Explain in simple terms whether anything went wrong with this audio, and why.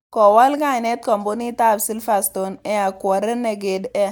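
Nothing went wrong here.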